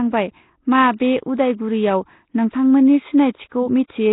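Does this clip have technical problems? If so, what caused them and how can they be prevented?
Yes. Throughout, the speech has a rough, hissy halo and a smeared, underwater quality, with nothing above 3.9 kHz. The likely cause is Nellymoser compression: the Flash codec gives each short block a fixed two bits per sample, leaves weak bands empty and fills them with noise, and damage this heavy fits a 16 kbps stream. Capturing with a modern codec such as Opus at a higher bitrate prevents it.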